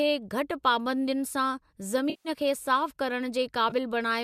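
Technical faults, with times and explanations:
2.10–2.29 s and 3.70–3.73 s, AAC frame loss with concealment: stretches of coded speech failed to arrive, about 150 ms and then about 20 ms, which fits runs of 10 ms frames. The decoder covered each gap by rebuilding sound from the last good spectrum with scrambled phase, so the speech smears into a noisy, phasey patch. The short one is a brief blur. The light coding damage of the surrounding low-delay AAC compression is likely AAC-ELD at around 64 kbps.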